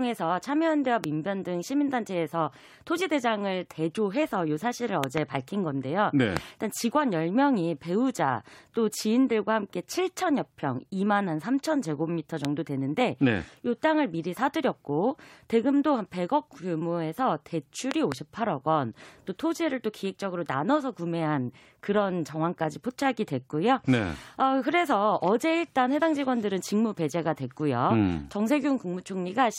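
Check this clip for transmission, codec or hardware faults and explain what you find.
There's one fault type here: a loud pop, five times. Single pops land at 1.04 to 1.06, 6.37 to 6.39 and 12.45 to 12.47 s; double pops at 5.04 to 5.20 and 17.91 to 18.14 s. Each jumps about 20 dB above the speech, which carries on underneath. The likely cause is a voltage spike from a connector, switch or static discharge.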